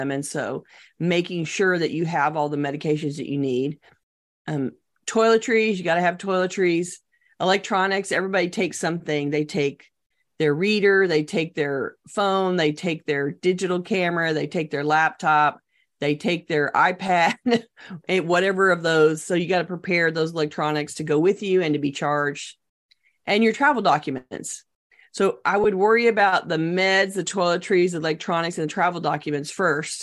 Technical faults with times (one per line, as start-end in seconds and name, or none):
25.64 lost LE Audio frames